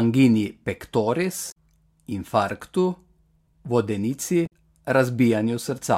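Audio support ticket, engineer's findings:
Two short glitches in the speech, 1.48 to 1.54 s and 4.43 to 4.51 s, each under a tenth of a second. Damaged data in the compressed stream. Corrupt bytes in the encoded file at those points. The decoder misreads the affected frames, loses sync and scans ahead for the next valid frame header, so a brief glitch replaces the intended audio. Suspect the storage or transport path feeding the decoder.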